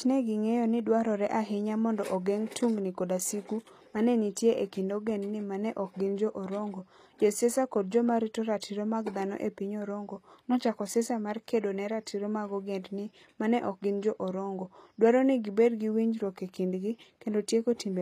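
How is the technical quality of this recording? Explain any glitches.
The recording has plainly audible codec damage throughout the speech. The cause is likely HE-AAC compression, and the damage fits a low bitrate around 24 kbps. Nothing is present above 14.9 kHz. The codec keeps only the lower spectrum in its coded form. It rebuilds the treble by spectral band replication, copying lower bands upward and shaping them with a coarse envelope. The top end reaches higher than plain AAC would at this bitrate but is not the original. Harmonics fail to line up across the join. S sounds turn gritty, metallic or lispy.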